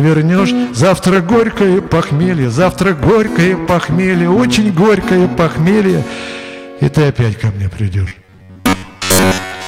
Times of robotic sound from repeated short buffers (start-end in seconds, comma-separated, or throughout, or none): 8.08-9.67